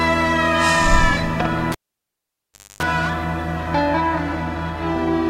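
At 1.72 s the cable is pulled and plugged in: a pop, about 1.06 s of near silence, roughly 0.27 s of 50 Hz mains buzz from tip contact, then a second pop at 2.83 s. The waveform shows spikes around a flat gap. The spectrogram shows broadband vertical lines and 50 Hz harmonic stripes.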